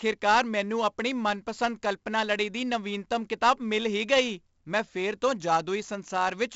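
Throughout the speech, 4-bit ADPCM compression codes each sample as a coarse step from a prediction, and its error noise rides the level of the speech, giving heavy gritty hiss on loud syllables and distorted attacks. Nothing remains above 7.7 kHz, which points to a 64 kbps stream.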